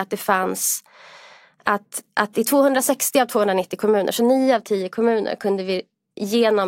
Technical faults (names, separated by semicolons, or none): none